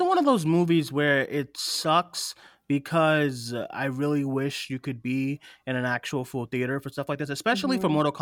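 Listening closely to the speech, nothing stood out as a technical problem at any point.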